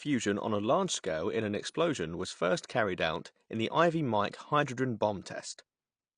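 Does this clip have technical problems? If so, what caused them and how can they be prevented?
Yes. Low-bitrate AAC compression likely coded this speech, removing everything above 9.8 kHz and leaving a dull, smeared, fizzy texture consistent with about 32 kbps. Encoding at a higher bitrate would prevent this.

Pre-echo comes from the transform block spreading quantisation noise ahead of a sharp attack at 4.31 s, so a brief 18 ms hiss precedes it and softens the onset. A higher bitrate or an encoder with better block switching would avoid it.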